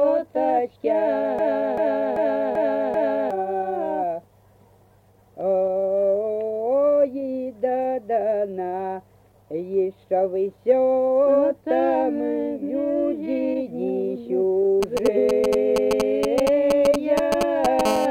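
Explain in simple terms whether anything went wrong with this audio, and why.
From 1.39 to 3.31 s, a snippet of about 0.39 s repeats five times back to back. This broken-record loop likely comes from playback stalling and resending its last fragment.

From 14.83 to 17.81 s, galloping bursts of short buzzes appear. These GSM signalling bursts come from a nearby 2G phone whose radio pulses leak into the audio circuit.

From 17.85 to 18.06 s, a harsh, raspy 217 Hz GSM phone buzz sounds. A nearby phone is in steady call transmission, which the circuitry picks up.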